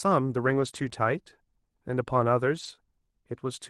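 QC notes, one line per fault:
0.41–0.87 s, 0.93–0.95 s and 2.55–2.73 s, lost packets rebuilt from error correction: no gaps at all, but these stretches turn grainier and a bit noisy. The packets went missing, and the next ones carried low-bitrate backup copies (Opus in-band FEC) that the decoder played instead. The first stretch is the long one, about half a second with some 240 ms of rebuilt audio. The last covers about 100 ms of rebuilt audio. The short 0.93 s bit is a single 20 ms frame sitting right after a concealed hole.
0.89–0.93 s and 2.75–2.79 s, short concealed packet loss: two quick smeary blips, each about 20 ms of audio that never turned up. The receiver papered over it by stretching the last sound forward, pitch-following where it was voiced and shaped noise where it wasn't, then crossfaded back in. That's the smear or wobble you catch, and a short consonant there can just go missing. 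The Opus call path's own coding noise and its 12 kHz top end sit under all of this.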